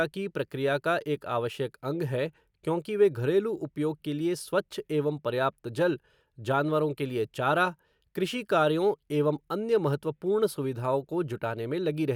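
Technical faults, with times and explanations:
The speech signal shows no technical faults at any point in the recording.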